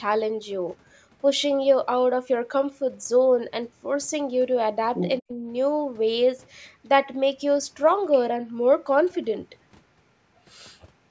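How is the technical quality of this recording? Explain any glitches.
Two brief call-processing glitches sit close together near the five-second mark, in speech passed through a call's microphone processing that carries nothing above 8 kHz.

Other side's voice leaking through, 4.95 to 5.12 s: a second voice breaks in only a few decibels below the talker. The likely cause is the echo canceller leaving part of the far end's loudspeaker sound in the microphone signal.

Speech suppressed in double talk, 5.2 to 5.31 s: the talker's voice plunges by roughly 40 dB for about a tenth of a second, briefly dropping out. This likely comes from the echo canceller mistaking overlapping talk for echo and turning everything down.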